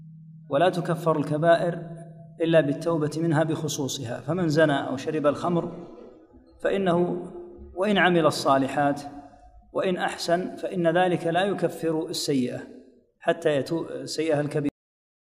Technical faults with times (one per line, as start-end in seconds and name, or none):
14.69-15.26 cut-off end